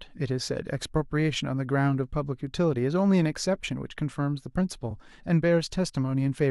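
At 4.90 to 4.92 s the speech stutters briefly from repeated frames: a 23.2 ms block, which fits a single compressed frame, plays twice in a row. The duplicate adds 23.2 ms to the audio.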